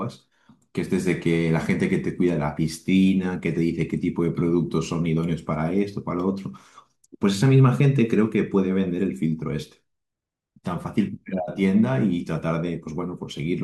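No technical faults can be heard in this speech recording.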